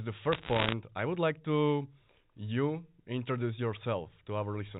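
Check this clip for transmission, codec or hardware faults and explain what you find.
One transmission fault is present: bit errors on a digital phone line, from 0.32 to 0.73 s, just before "I would like to". On a G.711 link each 8-bit code word carries one sample, so a flipped bit corrupts that single sample. Where the flip lands on a high-order bit or on the sign of a large sample, the value jumps and a sharp tick results. At an error rate of around one percent, these ticks cluster into crackle laid over the speech. The telephone coding itself sounds as expected, with nothing above 4 kHz, consistent with a 64 kbps mu-law line.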